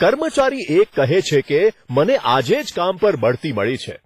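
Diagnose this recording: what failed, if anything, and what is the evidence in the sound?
Hard clipping runs through the whole speech clip. A stage before the end, a converter, number format or gain stage, was driven about 8 dB past what it could pass, so a small share of samples, around one or two percent, were cut flat. The waveform shows squared-off tops on the loudest peaks, and the spectrogram shows vertical smears of harmonics there, heard as crackle on loud syllables.

The codec stage also shows heavy damage throughout, likely from WMA compression. The spectrogram ends abruptly at 15.5 kHz, and weaker components look patchy and blocky in time. That fits a low bitrate near 24 kbps, where long transform blocks spread quantisation noise and zero quieter lines, giving a washy, ringing sound with hiss that rises and falls with the signal.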